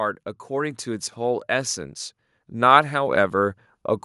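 From 0.48 to 1.78 s the level climbs by about 4 dB as automatic gain rising sets in: the gain control judged the input too quiet and eased its gain upward, so speech and background noise swell together rather than the talker getting louder. The same rise of about 4 dB recurs from 2.52 to 3.64 s. On a waveform the envelope, noise floor included, widens steadily across each span; a spectrogram brightens evenly at all frequencies.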